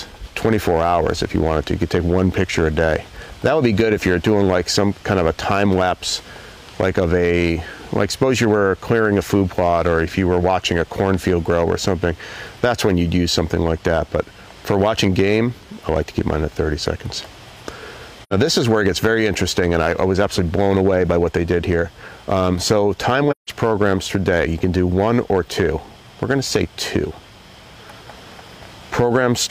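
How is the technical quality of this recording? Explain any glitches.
The recording has three audible glitches: one pair of pops and two short dropouts.

At 11.14 to 11.32 s there is a loud pop, heard as two sharp thumps a few decibels above the sound, which continues underneath. The likely cause is a voltage spike from a plug, switch or static discharge.

AAC frame loss with muting occurs at 18.23 to 18.33 s and again at 23.31 to 23.50 s. The decoder silenced missing frames, leaving soft-edged holes of about 85 ms and 171 ms. Those durations fit two and four lost frames respectively.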